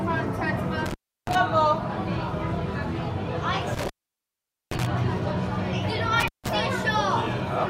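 Intermittent contact at 0.86 to 1.35 s, 3.75 to 4.86 s and 6.20 to 6.49 s: a loose cable or plug in the signal path breaks its connection momentarily, so the sound drops out abruptly for about 307 ms, 820 ms and 155 ms respectively. Each gap is bounded by crackle as the contact scrapes open and closed, and while the line is broken faint hiss remains in place of the signal.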